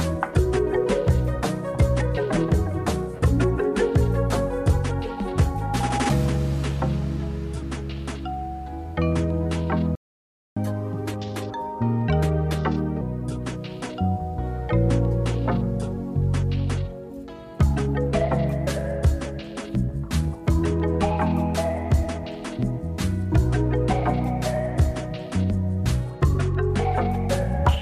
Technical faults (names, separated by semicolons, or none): playback stall; catch-up at higher speed